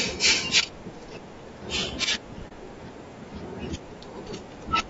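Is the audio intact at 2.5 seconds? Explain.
No. From 2.48 to 2.52 s there is AAC frame loss with muting. The decoder zeroed the missing spectrum, and the overlapping windows fade the sound out and back in. This leaves a brief dip of about 40 ms, which fits a single lost frame. On a waveform it shows as a tapered dip, and on a spectrogram as a narrow faded vertical stripe across all frequencies.

Underneath, the moment carries the rough, grainy sound of low-delay AAC compression. This is likely AAC-ELD at around 32 kbps, whose short frames smear the pitch harmonics and let noise fill between them. A spectrogram shows blurred, noisy harmonic lines and a thin, synthetic-looking top band.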